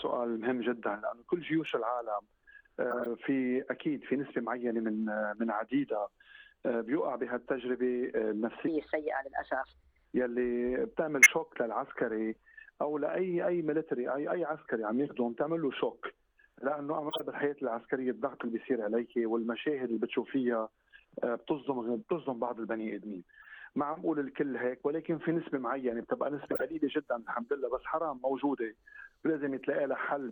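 The audio has two problems. Five short bursts of garbage come from a corrupt frame being decoded: at 2.91–3.07 s, 11.22–11.30 s, 17.09–17.20 s, 23.42–23.51 s and 26.51–26.62 s, damaged compressed frames get played anyway, so energy lands at the wrong frequencies as chirpy blips lasting a few frames each. Also, from 8.68 to 10.05 s there's a section at the wrong speed: it runs 1.26 times fast and sits roughly four semitones sharp, likely from that stretch being clocked at the wrong rate.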